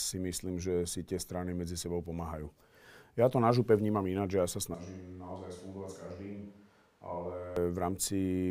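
A speech recording. At 4.74 s the sound turns abruptly roomy and hollow, with thinner bass and a drop of about 10 dB. Room noise rises to roughly 30 dB below the speech. The likely cause is a switch to a distant microphone, with the close microphone's signal lost and a farther pickup taking over. At 7.56 s the close, fuller sound returns just as suddenly.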